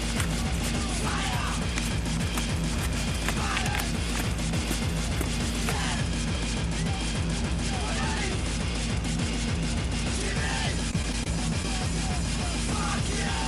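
From 10.91 to 11.27 s there is repeated packet loss, producing a robotic sound. Over this roughly 0.35 s stretch, five short holes open in quick succession, the longest about 20 ms and about 60 ms in total. The receiver fills each hole by extending the sound that came just before it, so about 17 percent of the span is synthesised. Because these patches follow one another closely, the passage comes across as choppy, with small pieces of the sound missing.

At 11.63 to 11.65 s there is a short concealed packet loss. About 10 ms of audio failed to reach the decoder in time. The receiver covered the gap by continuing the preceding sound and then blended back into the real signal. The result is a brief smear or wobble rather than an outright dropout. Coming shortly after the robotic stretch, it briefly roughens the sound again.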